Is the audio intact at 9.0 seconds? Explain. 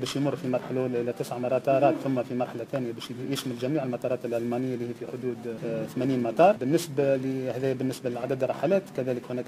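No. At 9.0 seconds the audio carries periodic clock jitter, present throughout the clip. Interference wobbles the converter's clock at about 2 kHz. This adds sidebands spaced that far above and below every component, strongest on high frequencies, giving a rough, metallic edge.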